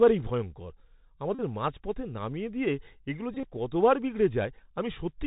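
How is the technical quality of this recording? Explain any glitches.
The quality is poor, with narrowband codec damage throughout and two buzzy dropouts. The Bluetooth CVSD headset codec runs the whole time, fitting a 64 kbps link. It encodes one bit per sample at 64 kHz, and nothing above 4 kHz survives. The result is plainly audible granular hiss and scratchy, distorted peaks. A Bluetooth headset packet repeated from 1.35 to 1.41 s, and again from 3.34 to 3.48 s. Lost packets were replaced by replaying the last one every 3.75 ms, which produces a steady buzz near 267 Hz. The first gap covers 41.2 ms. The second loses 67.5 ms scattered over 105 ms, with its longest run about 30 ms.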